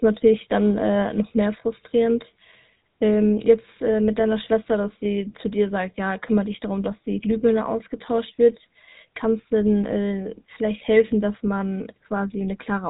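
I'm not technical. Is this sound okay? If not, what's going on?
No, the speech sounds buzzy, gravelly and muffled from start to finish, typical of the GSM full-rate codec used by early mobile phones, which discards everything above 3.8 kHz.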